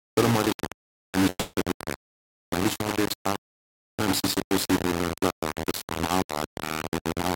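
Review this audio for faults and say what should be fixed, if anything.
The speech carries harsh, grainy distortion throughout that tracks the level of the sound, with error noise nearly as loud as the speech itself. This points to low bit depth without dither, likely rounding to about 3 bits. Keep at least 16 bits and apply dither before any word-length reduction.

From 1.29 to 1.55 s the speech breaks off. For about 240 ms the last sound is stretched into a fading buzz, followed by roughly 30 ms of silence before the speech resumes with that stretch missing. This is likely a long network dropout. Use a larger jitter buffer and redundancy or forward error correction on the link to prevent it.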